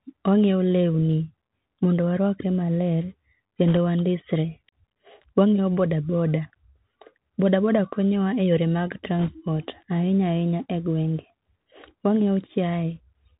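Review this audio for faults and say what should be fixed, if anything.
The whole clip went through the Bluetooth CVSD headset codec, a one-bit delta modulator with an adapting step, which fits a 64 kbps headset link. The speech is cut off above 4 kHz, s sounds turn scratchy, loud bright passages distort where the step can't keep up, and a granular hiss sits underneath.

Bit errors on a Bluetooth voice link hit from 3.68 to 3.77 s, just before "wa ndisre", and from 9.19 to 9.32 s, just after "wa e yore mag". Flipped bits, roughly one to two percent, push the delta steps the wrong way. Because each bit carries little weight, the result is a brief rushing crackle rather than loud clicks.

To prevent both, route the call over a wideband codec such as mSBC or LC3 and keep the headset close to the host, away from interference, so the link's error rate stays low.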